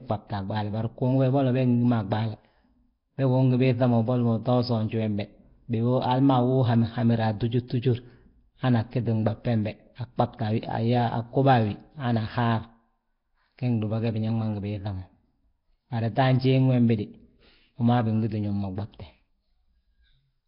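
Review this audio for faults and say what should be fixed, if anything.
Nellymoser compression runs throughout the speech. Nothing is present above 5.3 kHz, and a rough, hissy halo and smeared, underwater quality sit on every phrase. The likely cause is Flash's Nellymoser Asao codec, which fits a rate near 22 kbps. Its coarse bit budget starves weak bands, which are then filled with noise. To prevent this, record and export with a modern codec at a generous bitrate instead of Nellymoser.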